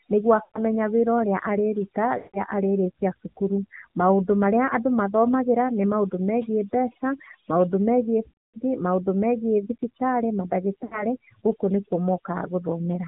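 Overdone noise removal runs through the whole speech clip: the suppressor cuts individual frequency bands whenever they approach its noise estimate, so the background falls to near silence dotted with twinkling specks. A spectrogram shows a blank floor scattered with isolated bright dots, and holes in the quieter parts of the voice. The AMR narrowband mobile codec is also present throughout, with plainly audible damage. Nothing above 4 kHz survives, so the spectrogram stops at a flat ceiling there, and the buzzy, synthetic tone fits a low rate near 7.4 kbps.

Lost AMR speech frames occur four times. Each time the decoder repeats its last good pitch and vocal-tract settings at falling gain, drawing the sound out before it fades. The first is at 0.44 to 0.60 s. The second runs from 2.18 to 2.42 s, between "wĩra ũrĩa arĩruta" and "arĩrĩkia cukuru". The third, the longest, runs from 8.30 to 8.59 s, after "megiĩ mbeca maũndũ megiĩ". 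The last is at 10.84 to 11.06 s, just before "gũkũ nĩkuo". On a waveform each one appears as a tapering smear that thins into a gap.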